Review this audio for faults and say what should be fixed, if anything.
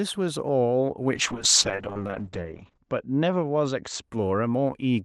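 From 1.15 s to 4.09 s there's a call bitrate drop. The Opus stream falls from 40 to 8 kbps, sits at the bottom for 1.63 s, and narrows from 12 kHz to 8 kHz, so the speech turns rough and muffled before recovering. Fix it by setting a higher minimum bitrate in the encoder and smoothing how fast the bandwidth estimator can cut the rate.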